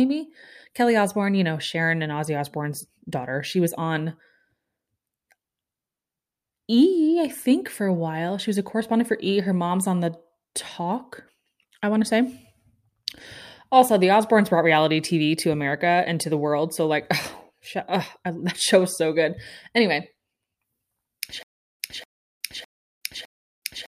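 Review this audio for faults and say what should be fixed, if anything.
From 21.43 s to the end, the speech breaks into a stutter with silent gaps. A 237 ms fragment repeats four times, each followed by about 371 ms of digital silence, every 607 ms. The likely cause is a stalled stream replaying its last buffer. Larger buffering and proper underrun handling would prevent it.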